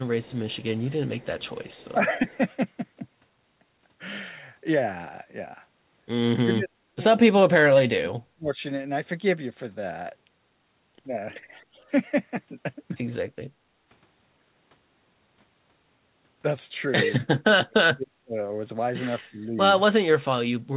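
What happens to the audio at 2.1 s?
The speech briefly dips by a few decibels between 1.93 and 2.19 s, with about 150 ms of it pulled down in all. This is likely speech suppressed in double talk: the echo canceller mistook overlapping talk for loudspeaker echo and attenuated it.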